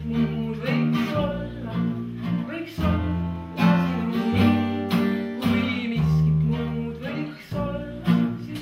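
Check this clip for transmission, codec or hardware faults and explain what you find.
Nothing stood out on listening to the clip.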